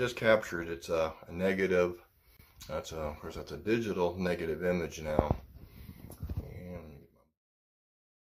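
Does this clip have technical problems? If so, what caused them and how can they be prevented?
Yes. At 2.37 to 2.39 s there's a gap at a join of encoded pieces, a dropout of about 27 ms that opens right in the middle of continuous sound, with edges the codec has softened. The sound picks up exactly where it left off. It looks like separately encoded pieces were butted together without trimming the encoder's start delay and end-of-stream padding. The fade-out from about 6.5 s to 7.41 s is a deliberate edit. To prevent the gap, encode the whole program in one pass, or use gapless-aware joining that trims each piece's priming delay and padding.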